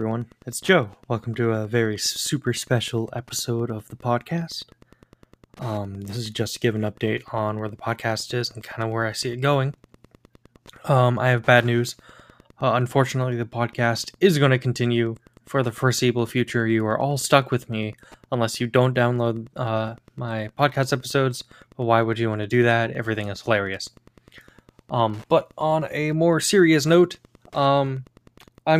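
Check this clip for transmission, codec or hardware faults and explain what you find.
One hardware fault runs through the whole clip: Wi-Fi interference. A nearby Wi-Fi radio's beacon, repeating every 102.4 ms, is rectified by the audio circuit into a steady tick nearly ten times a second, roughly 30 dB below the speech. A spectrogram shows evenly spaced thin vertical lines; the waveform shows small regular spikes.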